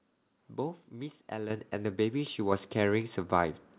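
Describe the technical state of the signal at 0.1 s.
At 0.1 s the speech signal is intact, with no fault present, just the narrowband character of the G.711 A-law call path, which leaves nothing above 4 kHz.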